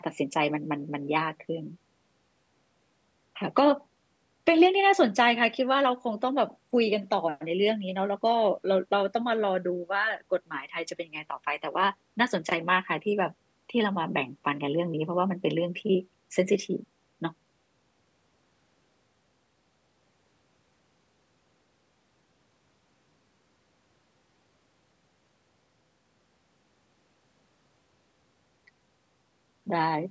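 Speech, with no technical faults present.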